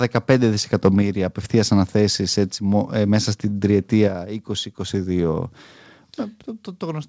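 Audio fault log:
0.73–0.88 s, microphone overload: The loudest stretch here takes on a harsh, crackly edge, as though the peaks were squashed flat. The likely cause is an input level set too high, so the waveform tops ran into the converter's ceiling, exceeding it by about 2 dB and clipping a small share of the samples. Flattening those crests creates new harmonics that were never in the speech, and those are heard as the gritty crackle over this passage.
1.02 s and 4.08 s, microphone volume stepped down: At each point the speech and the background noise beneath it drop together in one abrupt step, about 4 dB at 1.02 s and about 5 dB at 4.08 s. The first drop comes just after the distorted peak. This is likely the call software reacting to an over-hot input by cutting the microphone gain in a single jump rather than easing it down. The drop therefore hits everything at once instead of fading smoothly. 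The sound carries nothing above 8 kHz, which fits a wideband call codec path.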